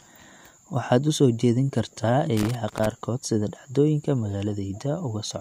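A speech recording with a burst of loose connector crackle from 2.37 s to 2.86 s, lasting about half a second. The sound here is irregular crackle and scratching rather than a steady noise. It comes from a worn or dirty contact in the signal chain making and breaking as it shifts. Each break chops the signal, and any DC present on the line turns those interruptions into sharp clicks.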